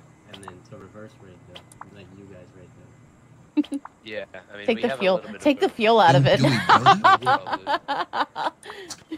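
From 0.81 s to 5.79 s, periodic USB or driver dropouts recur roughly once per second. Each skips about 4 ms of signal outright, producing a regular tick. On the waveform, each appears as an abrupt discontinuity; on a spectrogram, a thin broadband vertical line.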